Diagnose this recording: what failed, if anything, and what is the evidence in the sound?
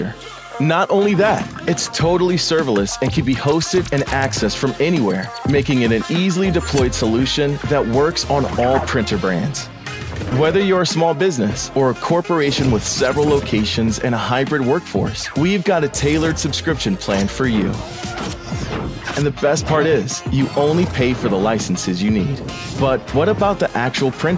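Nothing failed: the sound shows only the normal call microphone processing, with no content above 8 kHz.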